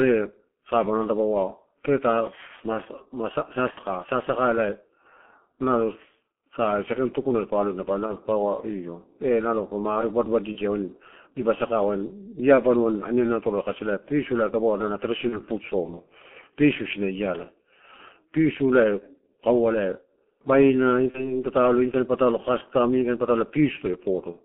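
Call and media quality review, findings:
G.723.1 codec, throughout: muffled, hoarse speech band-limited to about 200 Hz–3.4 kHz with smeared consonants. The heavy, slow-updating roughness, rather than plain filtering, fits a 6.3 kbit/s frame codec.

VoIP packet loss concealed by the speech codec at 3.71–3.80 s (about 60 ms lost), 8.07–8.17 s, 10.53–10.59 s, 15.29–15.41 s (between "kasi pisu ela ada" and "food soma"), and 21.11–21.43 s (between "baina ini" and "patalo inikain"); about 30 ms lost at each of the last four. Extrapolated buzzy tone or coloured noise that fades, instead of a silent dropout. Weak speech lingers after recovery.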